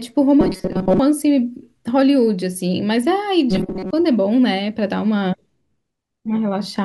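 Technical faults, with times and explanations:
0.41–0.99 s and 3.51–3.91 s: robotic sound from repeated short buffers. In both stretches the speech becomes a rigid, metallic buzz fixed at 188 Hz, following the rough shape of the syllables. The likely cause is audio arriving too seldom, with playback filling the gaps by looping the most recent fragment of about 5.3 ms. Most of each stretch, roughly 70 percent, is repeated material rather than new audio.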